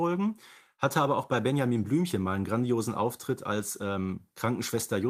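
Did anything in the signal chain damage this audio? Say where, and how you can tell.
No, nothing in the chain damaged this recording.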